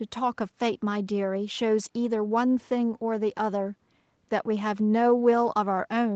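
There are no audible technical faults in this speech.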